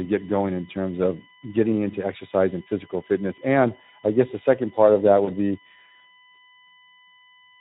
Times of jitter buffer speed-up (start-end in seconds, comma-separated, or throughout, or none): none